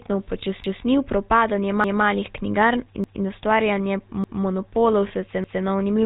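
The whole clip passed through the GSM full-rate codec, which fits a 13 kbps stream. The codec rebuilds the voice from a vocal-tract model driven by a sparse, regularly spaced pulse train, and it discards everything above 4 kHz. That damage is plainly audible: the speech sounds dull and band-limited, with a constant buzzy, gravelly roughness laid over every syllable instead of a clean, breathy texture.

From 0.64 s the audio was also processed in chunks that overlap, so each new chunk begins before the previous one has finished. At every join, 200 ms of sound plays a second time. This happens at 0.64, 1.84, 3.04, 4.24 and 5.44 s, each lasting until 0.2 s later, and the 1.2 s spacing fits one-second chunks plus the repeated overlap. Each join is heard as a click or a stutter, and the steady rhythm of these jumps makes the speech sound mechanically jerky.

Between 5.08 and 5.11 s, a stretch that fits a single lost 20 ms frame, a bad GSM frame was replaced by repeating the parameters of the last good one. 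The gap is too short to fade to silence. Instead the speech briefly freezes into a rough, metallic ring before the next intact frame takes over.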